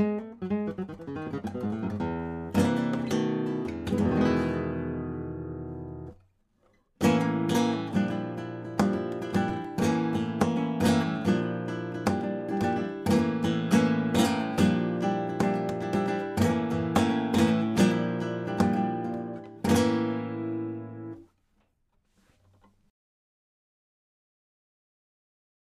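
A scratch or blemish on the disc destroyed more data than the player's error correction could rebuild, once per revolution, so the player had to patch over the damaged samples. The result is CD scratch ticks: between 9.35 and 9.94 s the audio carries five short, regular ticks, roughly eight a second, each a brief dropout lasting no more than a few milliseconds, where the interpolated or muted samples break the waveform.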